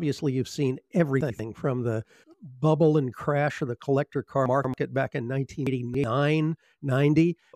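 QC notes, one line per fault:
1.21–1.39 s, 4.46–4.74 s, 5.67–6.04 s: chunks out of order. A 93 ms block plays one, two, then three blocks late, giving a jumbled moment with three hard joins; the spectrogram shows vertical broadband lines and broken harmonic tracks, the waveform abrupt steps.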